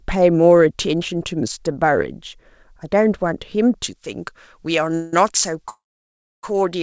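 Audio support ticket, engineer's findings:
Pre-emphasis left on, 3.84 s to end. Treble suddenly too strong, about 11 dB up at 10 kHz relative to 1 kHz. Sound turns thin, bright, sibilant. Fits a J.17-type boost with no matching de-emphasis. Band limit near 8 kHz points to a G.722 call codec at 64 kbps.

Call audio freeze, 4.95 to 5.13 s. Sound stretched into a fading buzz or hiss for 176 ms. Nothing lost, delay grows by 176 ms. Likely jitter buffer ran dry while packets were held up.

Call audio freeze, 5.69 to 6.44 s. Longer hold, 735 ms. Brief fading fill, then about 640 ms of silence. Resumes where it stopped. Nothing missing, delay grows by 735 ms. Likely same late-packet mechanism.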